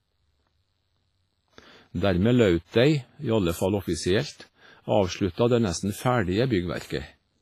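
Speech, likely run through heavy WMA compression at a low bitrate near 24 kbps, which smears it with ringing, washy artefacts and breathing hiss, with nothing above 15.4 kHz throughout.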